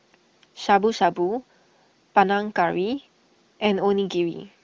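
No faults; the AMR wideband (HD Voice) path sounds clear.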